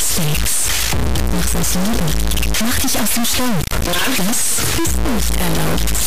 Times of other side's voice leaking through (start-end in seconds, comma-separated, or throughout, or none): none